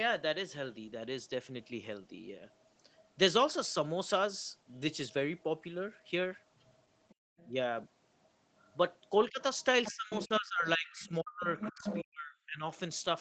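At 2.51 to 3.11 s a faint second voice sits under the talker, likely the other side's voice leaking through: the far end plays on a loudspeaker and the echo canceller leaves a remnant, roughly 35 dB down. It returns more strongly from 6.55 to 7.49 s, around 30 dB below the speech, and again from 8.23 to 8.75 s at a similarly low level. On a spectrogram these stretches show faint harmonic striations that do not line up with the main speaker's pitch. The whole picture stops at 8 kHz, as the call path normally does.

Inside the second leak, from 7.15 to 7.37 s, the background gated by the echo canceller drops out for about a fifth of a second. The canceller clamped the microphone while the loudspeaker was active, pulling the room sound down by about 33 dB. The waveform shows a short flat notch in the noise floor, and the spectrogram shows a brief dark vertical band before the background returns.

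From 9.29 to 12.63 s both sides likely talk at once, and the result is speech suppressed in double talk. The canceller could not tell the talker from the echo and turned everything down, cutting the voice in pieces for about two seconds in total, at worst by around 40 dB. Meanwhile the other side's voice leaking through, from 9.59 to 12.03 s, rises to roughly 10 dB below the speech. The waveform shows a ragged envelope with gaps, and the spectrogram shows holes in the talker's harmonics.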